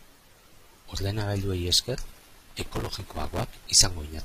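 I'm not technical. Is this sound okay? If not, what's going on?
No. From 1.07 s to the end there is an adaptive stream at a lower bitrate: the connection slowed, so the player switched without a gap to a cheaper copy of the speech. Treble above 14.9 kHz disappears and the voice turns thinner.

From 2.08 to 3.44 s there is processor overload crackle: the computer was too busy to deliver its tiny slices of audio, each roughly a millisecond or two, on time. Around two hundred slots were refilled with stale audio, producing a gritty tearing crackle.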